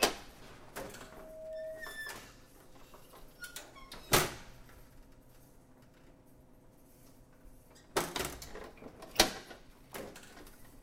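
From 1.02 s to 2.09 s a microphone picks up the loudspeaker it is feeding, and around 635 Hz the round-trip gain rises above one, so that frequency keeps reinforcing itself. The result is loudspeaker feedback squeal: a single steady tone that swells over roughly half a second until it sits at about the same level as the rest of the sound, then holds as a piercing ring before stopping at 2.09 s.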